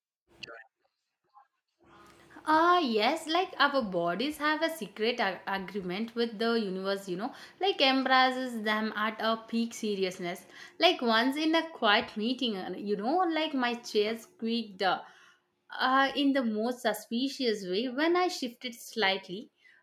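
A speech clip with a microphone volume step-down at 2.79 s: the voice and background together drop by about 2 dB in one instant step and stay at the lower level. This is likely the call software cutting the microphone's input volume after judging it too hot.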